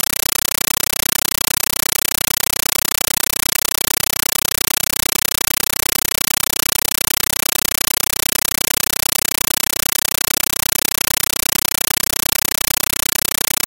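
Throughout, a compressed stream played as audio: undecoded AC-3 data replaces the sound as 9.33 ms noise bursts 31.25 times a second, heard as loud chattering static, seen as full-band stripes between silent gaps.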